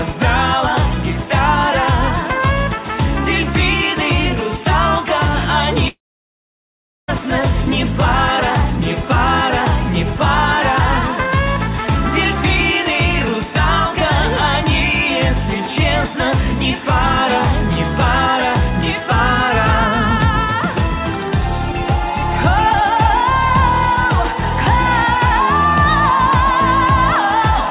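At 5.88 s a likely long network dropout stops audio from arriving. The receiver briefly stretches the last sound into a fading buzz, then about 1.1 s of near-silence follows until 7.11 s, when the sound resumes with roughly 1.2 s missing.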